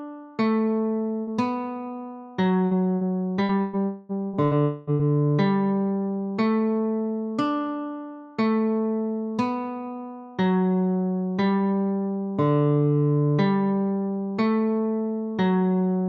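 The audio has three kinds of network fault. A burst of packet loss at 1.21 to 1.30 s is covered by about 55 ms of fading continuation, and about 60 ms of audio goes missing. From 2.65 to 5.02 s, repeated packet loss gives a choppy, robotic sound. Seven gaps are patched, the longest 122 ms, which covers about a fifth of that stretch. Inside it, at 3.85 to 4.12 s and 4.63 to 4.90 s, the sound is replaced for about 240 ms by a held, fading fill, with no full silence. Each then resumes further on, and a long network dropout is the likely cause.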